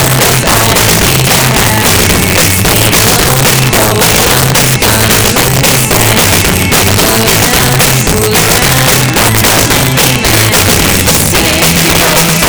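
Violent cracks break out on the loud peaks across the whole clip, far harsher than ordinary clipping. This is integer overflow. The signal was driven about 10 dB past the integer limit, so roughly 7 percent of samples wrapped to the opposite sign instead of being held at full scale.

From 0.07 to 5.76 s, a train of clicks ticks steadily at 11.1 per second, about seventy clicks of similar shape, each roughly 10 dB above the sound and audible in quiet gaps too. The likely cause is electrical interference or a faulty connection or power supply injecting pulses.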